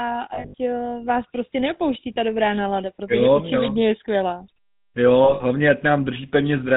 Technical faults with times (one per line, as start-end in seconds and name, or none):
0.00-6.77 GSM full-rate codec
0.34-0.55 lost GSM frames
2.14-2.17 lost GSM frames
5.24-5.42 lost GSM frames